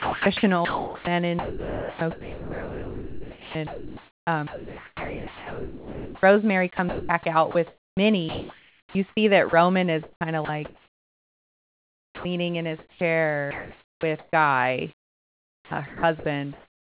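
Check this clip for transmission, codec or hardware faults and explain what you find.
The speech sounds choppy in four stretches, 0.00 to 6.23 s, 6.77 to 12.25 s, 12.79 to 14.33 s and 14.95 to 16.99 s. Syllables and word edges drop out. This is sound chopped by the voice detector, the likely cause. The sender's detector judged parts of the speech to be silence, stopped sending them, and the receiver filled the gaps with comfort noise. The fill covers about 5.2 s of the first stretch, 3.2 s of the second, 0.88 s of the third and 1.44 s of the last. Across the whole clip, nothing reaches above 4 kHz, which fits a narrowband telephone codec such as G.711.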